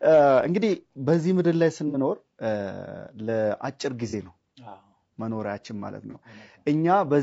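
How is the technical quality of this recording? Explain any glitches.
The technical quality is held back by coarse, low-bitrate coding throughout the speech, plus three brief dropouts where the decoder had to fill gaps.

The whole clip has plainly audible low-delay AAC compression, likely AAC-ELD at around 32 kbps. Short coding frames can't resolve the pitch harmonics cleanly, so the voice sounds rough and grainy, with noise filling the spaces between harmonics. On a spectrogram the harmonic stripes look blurred and speckled, and the upper band looks thin or synthetic rather than detailed.

AAC frame loss with concealment occurs at 1.88 to 1.96 s (about 60 ms, which fits two lost frames), and at 4.10 to 4.15 s and 6.11 to 6.16 s (about 30 ms each, one frame apiece). At each gap the decoder rebuilt the missing audio from the last good spectrum, so each patch sounds briefly smeared, noisy or phasey. 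On a spectrogram each patch appears as a short smudge where the harmonic detail dissolves into diffuse energy. The waveform there looks noisier and less periodic.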